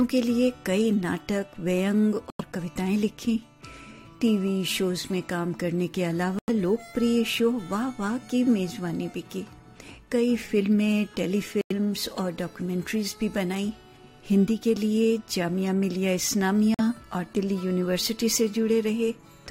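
Compressed frames arrived damaged, the decoder rejected them, and silence was substituted: corrupt frame muted at 2.30–2.41 s, 6.39–6.50 s, 11.61–11.72 s and 16.74–16.81 s. Each hole opens abruptly and spans several frames, about 0.11 s (the last 0.06 s), with timing kept.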